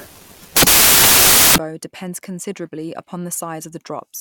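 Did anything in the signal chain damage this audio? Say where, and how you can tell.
Yes: sample-format conversion built samples from the wrong bytes, giving loud broadband noise from 0.0 to 1.58 s, until "depends considerably", as low bits became sample magnitudes.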